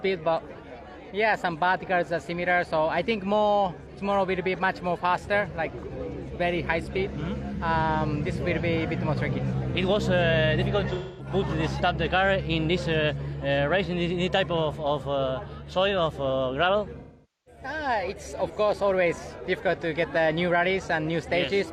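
Smeared, phasey patches at 10.93 s (256 ms) and 16.99 s (469 ms) come from AAC frame loss with concealment, the decoder filling lost frames from the last good spectrum.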